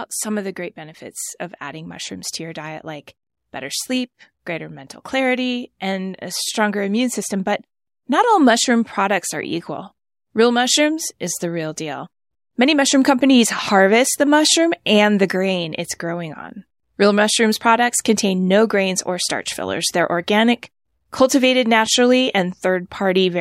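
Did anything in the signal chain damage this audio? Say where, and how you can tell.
No, nothing audible points to damage at any stage of the chain, from capture through to playback.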